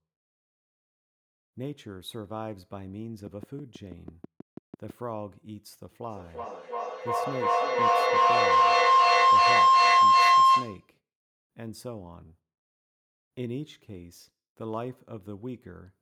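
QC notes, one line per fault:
3.27–4.91 s, train of clicks: a run of about ten sharp, near-identical pulses at a steady 6.1 per second, ticking over the speech and standing out at roughly 10 dB above it. The even spacing and matching shape point to an outside source, likely interference from nearby equipment or a faulty connection or power supply, rather than anything in the talker's own sound. A spectrogram shows thin vertical broadband lines at regular intervals; the waveform shows evenly spaced spikes.
6.09–10.95 s, feedback howl: a tone near 1 kHz swells until it sits about 17 dB above the speech, pulsing roughly every 300 ms. The pulsing fits a microphone-to-loudspeaker loop between two devices on the same call, where each trip round the loop adds level and narrows the sound toward the frequency the loop favours, until the loop is broken and the howl stops. A spectrogram shows a bright horizontal band near 1 kHz that thickens and beats; the waveform shows a growing, throbbing envelope.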